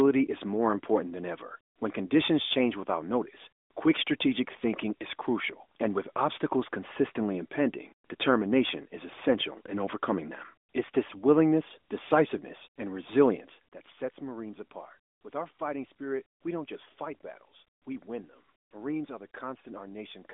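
Nothing in this speech recording stood out as a problem on listening.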